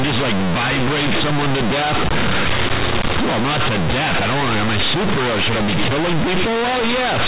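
A speech recording that is very loud and buzzy from start to finish, with strong noise filling the pauses. This is companded audio read as linear: mu-law bytes are played as plain 8-bit samples without expansion, so quiet passages come out as large as loud ones and the waveform is bent out of shape. Beneath this the G.711 telephone coding at 8,000 samples a second passes nothing above 4 kHz.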